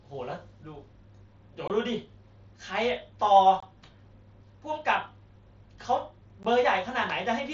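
Unconcealed Bluetooth headset packet loss breaks this speech recording at 1.68–1.70 s, 3.60–3.63 s and 6.43 s. Voice packets between headset and phone went missing and silence or an idle pattern replaced them, leaving abrupt 15 to 22.5 ms holes in the mSBC wideband link.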